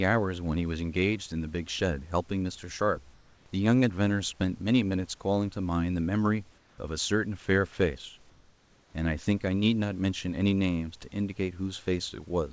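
In three pauses in the speech, 3.14 to 3.46 s, 6.58 to 6.78 s and 8.30 to 8.94 s, the room background turns into a flat, textureless hiss about 2, 4 and 1 dB quieter. This is likely comfort noise in place of the background, generated while transmission paused.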